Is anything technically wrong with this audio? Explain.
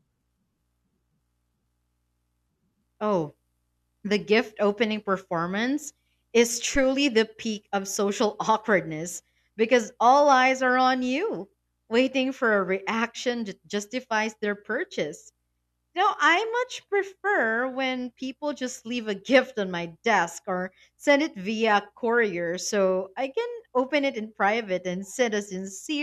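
Yes. From 6.75 to 6.87 s, between "gift opening performance is" and "the peak of social", there is a phantom power thump. A supply switched on or off on a live input sends a voltage step through the coupling capacitors, producing a deep thump that peaks at about -20 dBFS and decays within 27 ms. Unlike a plosive pop, it matches no consonant and has no breath noise with it.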